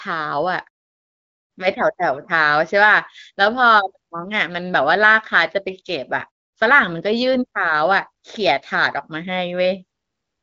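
Nothing in this recording stood out as a technical problem on listening.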